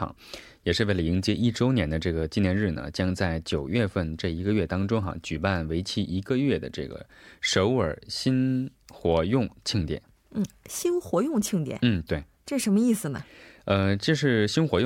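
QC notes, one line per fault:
No faults found.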